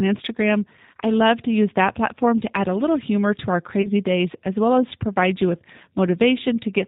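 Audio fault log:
Throughout: G.729 codec. The speech sounds slightly rough and synthetic, which fits the G.729A flavour at 8 kbit/s. It's rebuilt from a vocal tract filter, a pitch predictor and a few pulses per frame, and nothing above 4 kHz gets through, so the damage is plainly audible.
3.82 to 3.88 s: VoIP packet loss concealed by the speech codec. About 20 ms of audio went missing, one packet's worth. The decoder stretched its last pitch and filter into a fading buzzy tone or coloured noise, and the speech stays weak briefly afterwards while frames rebuild.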